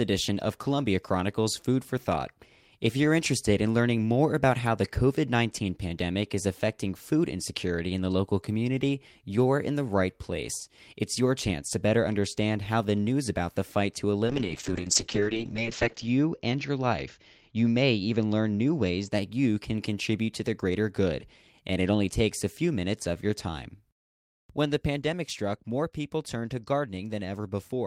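From 14.26 s to 19.17 s the speech suffers a call bitrate drop: the encoder is squeezed onto far fewer bits, consistent with a fall from roughly 32 kbps to around 7 kbps. The top end collapses from 20 kHz to 8 kHz, so the sound turns muffled, rough and watery, at its worst for about 1.83 s. Unlike packet loss, there are no gaps or dropouts, only a steady coarsening that lifts once the bitrate recovers.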